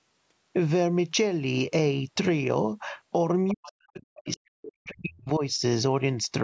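From 3.48 to 3.71 s a faint second voice cuts in at about 15 dB below the main speech. This is the other side's voice leaking through, most likely because loudspeaker playback reached the microphone and the echo canceller left a residue. Starting at 3.51 s and running to 5.43 s, the main speech is repeatedly ducked, at its deepest by roughly 40 dB, for around one and a half seconds in total. It sounds like speech suppressed in double talk: with both sides active, the canceller likely mistook the near talker for echo and pulled everything down. Inside that stretch, from 4.17 to 4.37 s, a second, weaker scrap of the far voice leaks through at about 25 dB below the speech.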